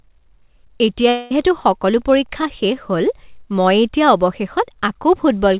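From 1.09 to 1.31 s there is a long network dropout: the incoming stream most likely stopped delivering audio for roughly a fifth of a second, and the receiver had nothing real to play. It bridged the gap by extending the last sound it had, so the speech turns into a synthetic buzz or hiss lasting about 0.21 s that fades rather than falling to silence, and the original speech from that stretch never returns before the real signal resumes.

At 2.41 to 2.43 s comes a short concealed packet loss. About 10 ms of the call arrived too late or not at all for the decoder, and the receiver patched the hole by carrying the preceding sound forward, then crossfading back into the genuine stream. The result is a tiny smear or wobble in the speech rather than a clean gap. The narrow call codec path, with nothing above 4 kHz, is audible throughout as a band-limited, telephone-like tone.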